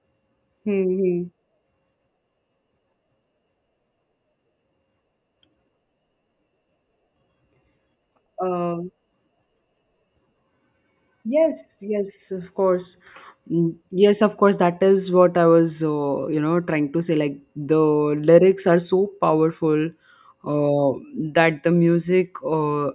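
No technical faults can be heard anywhere in the recording.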